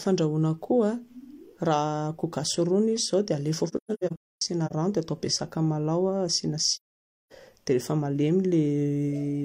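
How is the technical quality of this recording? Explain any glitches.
The recording has two dropouts, both caused by AAC frame loss with muting. From 3.68 to 4.73 s, just before "rano dia hatao be", parts of the coded stream went missing and the decoder set their spectrum to zero. About 0.6 s of the speech disappears in holes scattered over roughly a second, and the longest is around 0.3 s. From 6.76 to 7.32 s, a similar loss cuts out about 0.55 s. The overlapping transform windows fade each hole out and back in, so the gaps have soft edges.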